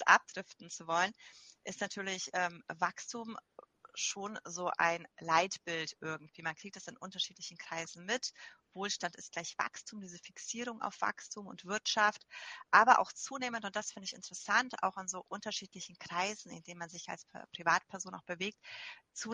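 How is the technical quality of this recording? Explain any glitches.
No glitches or technical faults can be heard anywhere here.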